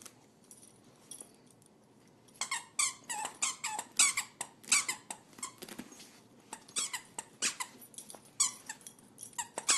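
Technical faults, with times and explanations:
No technical faults can be heard anywhere here.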